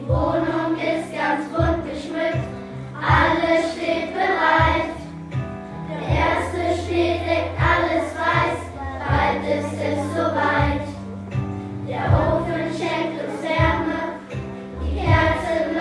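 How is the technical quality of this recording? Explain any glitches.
No glitches or faults are audible.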